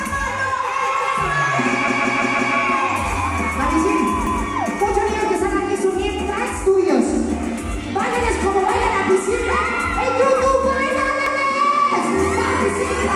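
Repeated buffers stutter at 1.88 to 2.56 s (four extra plays), 4.27 to 4.44 s and 11.26 to 11.44 s. New audio arrived late, so a 171 ms block, which fits an 8192-sample buffer, replayed with hard joins, showing as identical spectrogram slices and abrupt waveform seams.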